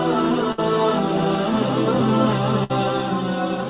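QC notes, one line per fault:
0.52–0.60 s and 2.64–2.72 s, burst of packet loss: about 60 ms of audio drops out each time, with the last sound carried on and faded for nearly 60 ms before resuming further along. On a spectrogram the 4 kHz-limited band smears into a flat, fading streak; the waveform shows a decaying repeat, then a jump.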